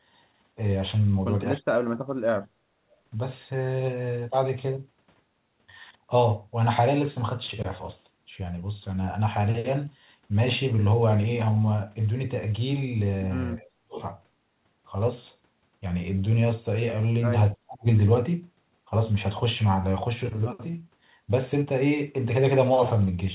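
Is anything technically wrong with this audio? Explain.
Yes. The speech dips from 1.6 to 2.68 s, 13.59 to 14.0 s and 17.55 to 17.86 s, falling by roughly 30 to 40 dB. This is likely speech suppressed in double talk: with both ends talking, the echo canceller mistook the near talker for loudspeaker echo and pulled it down. The narrowband sound, with nothing above 4 kHz, fits a G.711 call path.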